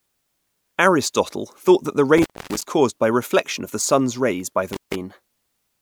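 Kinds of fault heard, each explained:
Intermittent contact: A loose cable or plug briefly lost its connection, twice. The speech cuts out with crackle at either edge, for about 0.26 s around 2.18 to 2.64 s and about 0.15 s around 4.73 to 4.95 s, leaving faint hiss while open.
Frames out of order: Two adjacent blocks of coded audio, each about 26 ms and fitting single frames, were decoded in swapped order. Around 3.81 to 3.87 s the speech briefly flutters garbled, and no time goes missing.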